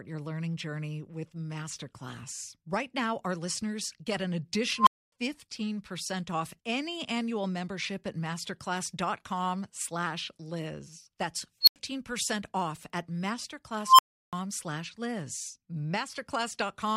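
An unstable filter runs away at 4.77, 11.61 and 13.85 s. A tone near 1, 4, then 1 kHz swells within 0.06–0.14 s, clips, and cuts to brief silence.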